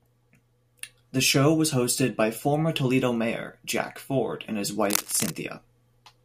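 A speech clip in which a worn cable or connector, likely being moved, produces cable scratch noise from 4.84 to 5.34 s: dense, uneven scratching bursts only a little below the speech level.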